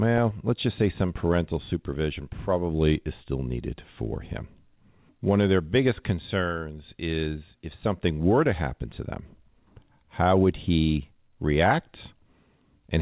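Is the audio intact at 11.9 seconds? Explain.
Yes, the speech at 11.9 s is intact, with nothing missing or disturbed, and only the normal narrowband character of the call path, with nothing above 4 kHz, can be heard there.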